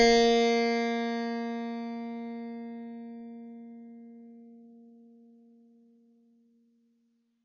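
From start to finish the music sounds dull and smeared, with a warbling, fizzy texture on sustained sounds and nothing above about 10.4 kHz. This is likely AAC compression at a low bitrate, around 24 kbps, where the coder drops the top band and quantises coarsely.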